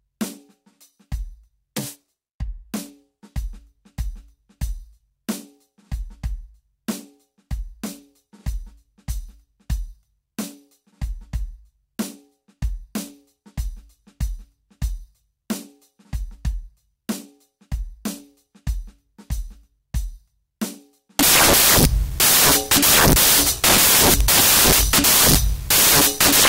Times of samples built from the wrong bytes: 21.19-26.48

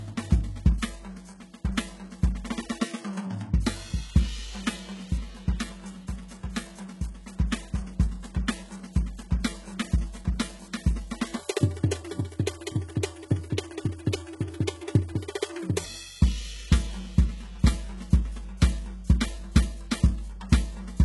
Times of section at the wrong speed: 11.39-15.84

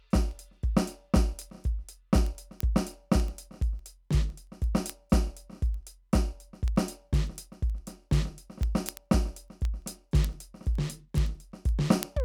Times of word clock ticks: 0.14-12.20

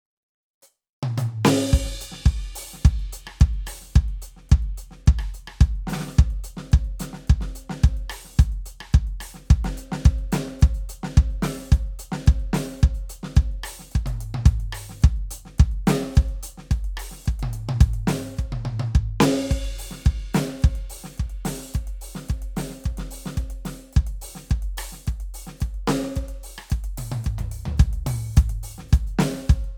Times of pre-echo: none

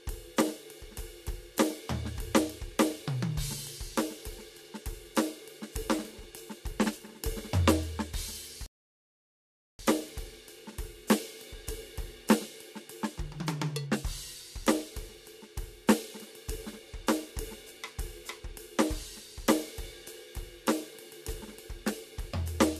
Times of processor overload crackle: none

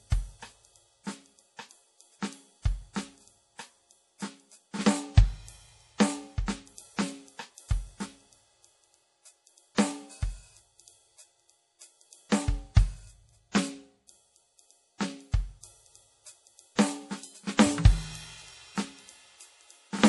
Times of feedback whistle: none

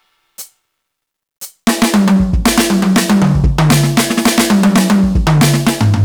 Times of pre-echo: none

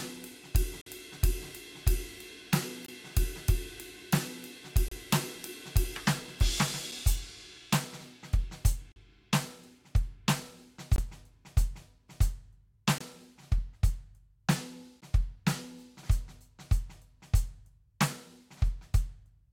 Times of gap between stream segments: 0.81-0.86, 2.86-2.88, 4.88-4.92, 6.91, 8.92-8.96, 10.96-10.98, 12.98-13.01, 15.01

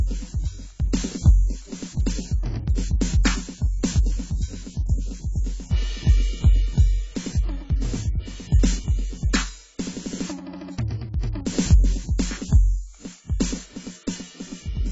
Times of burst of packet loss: none

